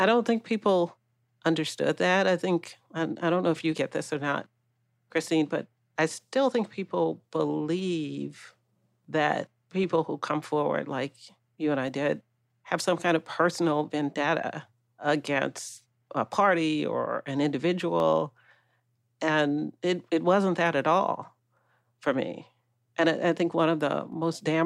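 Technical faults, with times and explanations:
1.69–24.12 s, clock drift buffer slips: a click recurs every 2.04 s, about ten in all, likely because two devices' clocks differ by roughly 70 ppm, so a few samples are dropped or repeated. Each appears as a waveform discontinuity and an evenly spaced, thin vertical spectrogram line.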